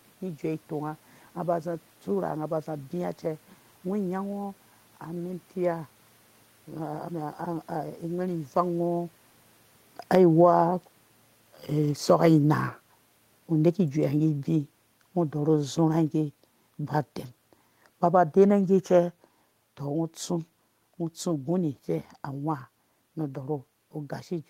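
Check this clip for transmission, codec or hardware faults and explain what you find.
One hardware-side fault stands out: automatic gain falling, running from 8.59 s to 21.76 s. The automatic gain control judged the input too loud, or its background noise too strong for its starting gain, and eased its gain down, about 12 dB in total over those thirteen seconds. The speech starts full and then sinks, and the room noise sinks with it, which separates this from the talker simply moving around 8.5 s. On a waveform the envelope tapers steadily. On a spectrogram the speech and the noise floor fade together across every band.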